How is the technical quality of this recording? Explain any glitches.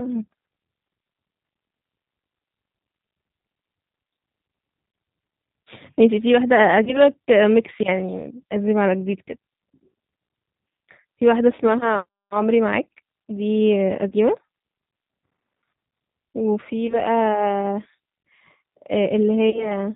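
The speech is carried throughout by the G.729 codec at 8 kbit/s, and its damage is plainly audible. Nothing above 4 kHz survives, so the speech sounds narrowband, slightly rough and synthetic. The codec rebuilds each 10 ms frame from a vocal tract filter, a pitch predictor and a few pulses, and that coarse model causes the roughness.

VoIP packet loss concealed by the speech codec occurs five times: 4.92–4.94 s, 6.85–7.01 s, 14.09–14.13 s, 16.87–17.00 s and 19.50–19.78 s. About 20 ms of audio goes missing each time, and about 40 ms in the last gap, which fits two consecutive packets. The decoder fills each gap by extending its last pitch and filter at falling gain, giving a brief buzzy or noisy, fading smear. Because each frame builds on the previous one, the speech stays weak or distorted after the gap, which is why most disturbances outlast the lost audio.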